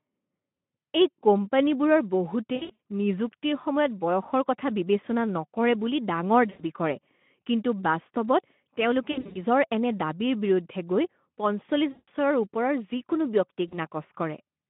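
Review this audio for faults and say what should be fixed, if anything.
VoIP packet loss concealed by the speech codec occurs at 2.55–2.79, 6.49–6.62, 9.11–9.38, 11.91–12.09 and 13.68–13.76 s. The decoder extrapolates missing audio into fading, buzzy smears. Adding jitter buffering and forward error correction would prevent this.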